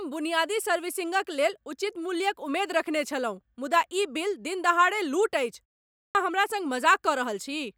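Right after "लूट अछि", at 5.92 s, there's a clipped start after a pause: the output seems to nod off during the 0.35 s gap, swallowing about 230 ms so the next word bursts in abruptly.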